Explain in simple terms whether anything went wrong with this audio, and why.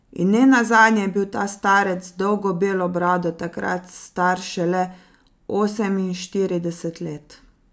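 Nothing went wrong here.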